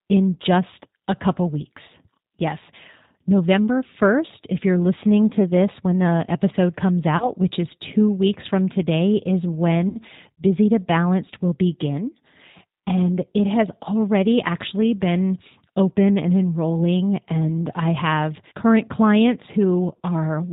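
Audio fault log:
throughout, G.729 codec: The speech has that rough, slightly synthetic edge you get when a decoder rebuilds the voice from a vocal tract filter, a pitch predictor and a handful of pulses per frame, and nothing above 4 kHz gets through, so it sounds boxed in and dull up top. The damage is plainly audible, which fits the 8 kbit/s G.729A flavour of the codec.
7.17 to 7.30 s and 9.89 to 10.01 s, VoIP packet loss concealed by the speech codec: Audio goes missing twice, about 30 ms the first time and 60 ms the second, which points to one lost packet and then two. The decoder covers each gap by stretching the last pitch and filter into a buzzy tone or coloured noise that fades. Because each frame leans on the previous one, the voice stays weak or smeared past the gap, to about 7.30 s and 10.01 s.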